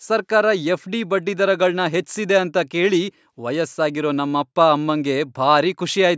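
The speech carries no technical faults, only the ordinary marks of a call's microphone processing, which trims the lowest bass and leaves nothing above 8 kHz.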